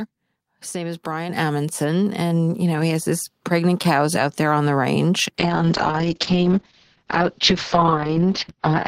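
It's a speech clip with two faults. At 1.29 s there's a microphone volume step-up: the call software decided the mic was too quiet and raised the input gain in one jump, so the voice and the background noise both get louder together, by about 6 dB. Then from 5.39 s to the end there's a call bitrate drop. The bandwidth estimate fell and the encoder was forced to code far more coarsely, so the sound goes rough and muffled as the top end collapses from 20 kHz to 6 kHz. That fits a fall from about 32 kbps to about 7 kbps, and it sits at its worst for roughly the last 3 seconds.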